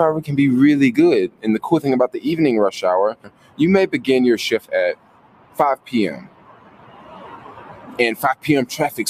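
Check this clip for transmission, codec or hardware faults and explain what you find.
A noise suppressor designed for speech is processing non-speech sound here, and its gain swings by around 20 dB across the whole clip.

Noise suppressor applied to music or sounds: it treats steady tones and decaying tails as noise, so attacks get through while sustained parts sink. The waveform envelope pumps, and spectrogram tails look chopped off.

Sound cut by the noise suppressor: at 1.29–1.44, 3.14–3.6, 4.95–5.59, 5.76–5.91 and 6.17–7.99 s, held sound drops by up to about 15 dB. These spans show as dimmed spectrogram bands and a sagging waveform.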